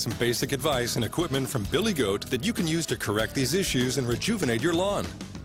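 No technical faults can be heard anywhere here.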